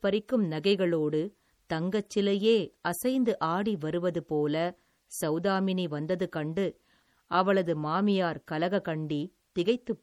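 Throughout, the speech swirls and warbles from likely MP3 compression near 48 kbps. Treble still reaches 20.7 kHz, so this is flickering detail rather than muffling.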